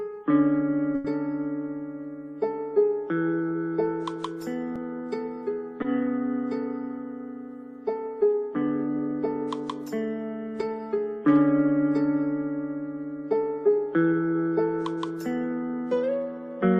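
The audio has two short stalls from a late packet, at 0.95 to 1.06 s and 5.82 to 5.86 s, where the receiver stretched the last sound for 90 ms and 20 ms until the packet arrived. Unlike a dropout, nothing is cut out: the sound is held too long, then resumes where it left off, a little later each time. From 13.72 to 14.34 s a jitter buffer speed-up trims about a tenth of a second in small pitch-period pieces, so the audio runs at 115% speed. The pitch stays the same, which separates it from a pitch shift or a faster sample rate.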